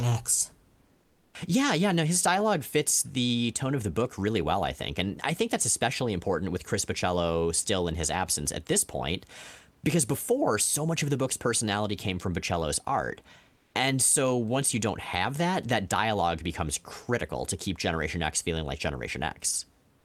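From 0.97 to 1.33 s and again from 13.57 to 13.69 s, the room's background is swapped for comfort noise: a steady, featureless hiss, about 3 dB quieter in the first gap and about 1 dB in the second. The likely cause is discontinuous transmission, with the sender pausing in the silences and the receiver synthesising filler. Unlike a gate or dropout, the hiss never falls to silence; it only loses the real room's texture.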